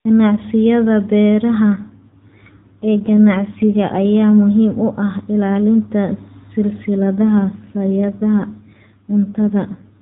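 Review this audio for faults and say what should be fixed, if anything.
The speech has two AMR rate drops, from 1.65 to 4.06 s and from 6.96 s to the end of the clip. In both stretches the voice turns rougher and buzzier while the narrowband bandwidth below 4 kHz stays the same and the audio runs without a gap. This points to the adaptive codec stepping down from about 12.2 kbps to about 5.9 kbps, with fewer bits per frame left for the excitation pulses. Preventing it requires keeping the radio link margin high enough that the network does not need to trade speech bits for error protection.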